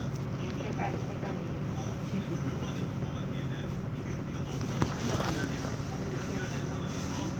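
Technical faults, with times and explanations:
3.78–6.55 s, call bitrate drop: the sound turns coarse and duller as the encoder is starved of bits, which fits a fall from 64 to 28 kbps, before recovering.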